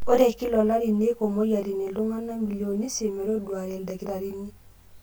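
A rough, slightly doubled speech sound persists throughout, from channel delay (comb filtering): one channel lags roughly 20 ms, so summing to mono cuts closely spaced notches from about 20 Hz.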